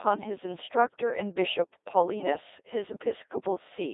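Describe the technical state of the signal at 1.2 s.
At 1.2 s you're hearing the Codec 2 vocoder, and it runs through the whole clip, not just that moment. Nothing of the original waveform survives. The decoder rebuilds the speech from sine waves driven only by pitch, voicing, energy and a rough spectral envelope, at a sparseness that fits roughly 2.4 kbit/s. The damage is heavy, so the speech comes out robotic and buzzy, squeezed into a narrow 300 Hz to 3.7 kHz line band.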